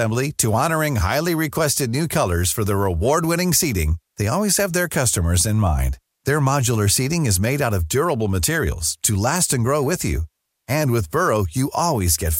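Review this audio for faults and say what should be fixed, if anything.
Nothing here needs fixing, so this speech can stay just as it is.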